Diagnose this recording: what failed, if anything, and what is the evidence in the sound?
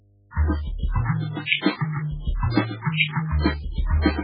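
Analogue wiring failed. A steady 50 Hz hum runs under the music from start to end, around 35 dB below it. This mains hum points to a ground loop or a nearby transformer. Power-line current leaks into the signal path and sits there as a constant low tone.

The codec stage shows heavy damage. Nothing survives above 4.9 kHz. The sound is watery and swirly, with weak components flickering in and out. The cause is likely MP3 compression at a very low bitrate, around 8 kbps. Short of bits, the encoder drops quiet frequency lines and cuts the treble.

Pre-echo comes from the same codec. From 1.62 to 1.66 s, a hiss about 43 ms long comes before a sharp attack. That attack sounds softened. The encoder spread its noise across the whole block, so noise meant for the loud onset filled the quiet moment before it.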